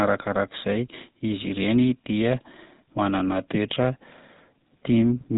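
From start to finish, the speech carries the sound of the GSM full-rate codec. Nothing survives above about 3.8 kHz, so the top end is missing and sibilants lose their edge. The codec rebuilds the voice from a vocal-tract model driven by sparse, regularly spaced pulses. That coarse excitation leaves a buzzy, gravelly roughness on the voice. The damage is plainly audible. It fits a 13 kbps mobile voice path.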